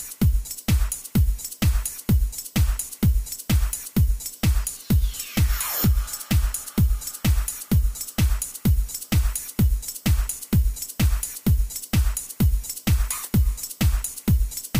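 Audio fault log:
No technical faults can be heard anywhere in the audio; the signal stays continuous throughout.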